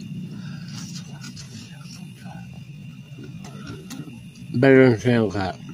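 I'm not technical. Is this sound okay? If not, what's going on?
No, not quite. From about 1.21 s right to the end, the audio suddenly drags, playing at roughly 0.69 times its normal pace while the pitch stays exactly where it was. That's a time-stretched section. It was likely stretched by software to fill a set length, which keeps the pitch by repeating tiny slivers of sound.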